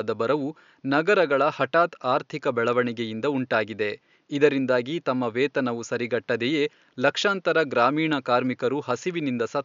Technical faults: none

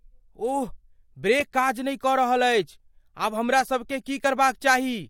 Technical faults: overlap between stream segments

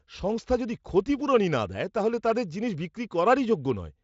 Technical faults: none

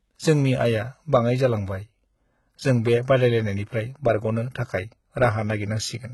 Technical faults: HE-AAC compression

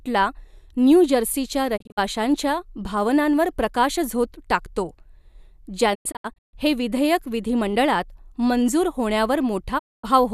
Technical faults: digital broadcast dropout

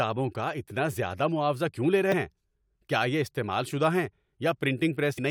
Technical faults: damaged data in a compressed stream

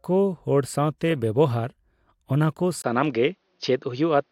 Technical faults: input switched to a poorer device

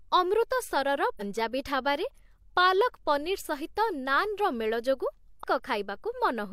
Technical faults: damaged data in a compressed stream

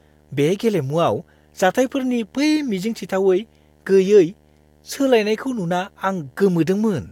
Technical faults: video or display buzz

